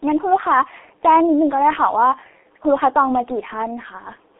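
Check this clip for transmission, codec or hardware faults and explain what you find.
One codec fault runs through the whole recording.

G.723.1 codec, throughout: the speech has been squeezed through a low-rate telephony codec, which fits its 6.3 kbit/s mode. The line passes only about 250 Hz to 3.6 kHz, with nothing above 3.8 kHz. With long 30 ms frames and a slowly updated voice model, the damage is heavy, leaving muffled, hoarse speech and smeared consonants.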